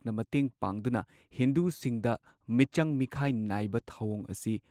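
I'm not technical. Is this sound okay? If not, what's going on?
No. From 2.1 s to the end there is a call bitrate drop. The call judged its connection weaker and squeezed the speech into far less data. The sound becomes rougher and less clear, and the worst stretch lasts about 1.4 seconds.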